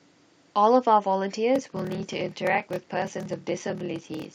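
From 1.53 s to the end, a steady 38.3 Hz buzz runs under the speech. This is a block size mismatch (padded): zeros fill out each short block, which fits 1024-sample writes. Speech slows to 0.889 times speed but keeps its timbre, unlike a sample-rate error.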